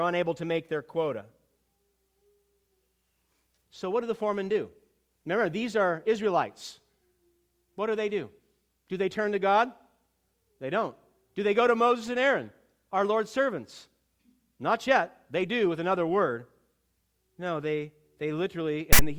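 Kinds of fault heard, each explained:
File tags played as audio: text metadata near the end got decoded as samples, so from 18.93 to 18.99 s there's a loud, lopsided rasp with hard edges.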